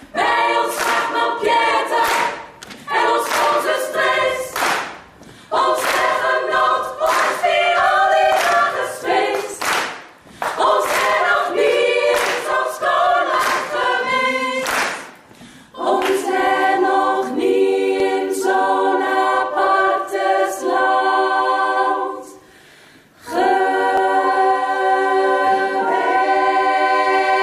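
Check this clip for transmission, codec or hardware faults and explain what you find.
There are six short skips where the audio jumps ahead, at 0.80, 3.93, 9.54, 13.84, 18.00 and 23.98 s. At each one the sound lurches forward, with no gap of silence. The losses are tiny, somewhere around 5 to 20 ms each. The likely cause is a dropped buffer (overrun): the software didn't read its samples before the hardware overwrote them, so that chunk vanished and the two sides got spliced straight together.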